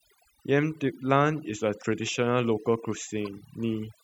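A noise reduction stage was set far too aggressively on this speech recording, so the whole clip carries overdone noise removal. Whenever a frequency band dropped close to the tool's noise estimate, it was pulled almost to silence, and the softer parts of the voice were cut along with the background noise. The gaps between phrases fall to near silence dotted with small twinkling specks. At 3.25 to 3.27 s there is damaged data in a compressed stream: a short stretch of the encoded data was corrupted, so the decoder could not read those frames properly and lost its footing until it found the next valid frame header. That gap of about 20 ms is heard as a brief glitch.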